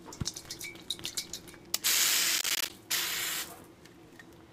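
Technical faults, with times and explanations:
2.38 to 2.74 s, processor overload crackle: roughly twenty buffers of about 10 ms miss their deadlines. Each leaves a hard-edged silent gap, together heard as gritty crackle.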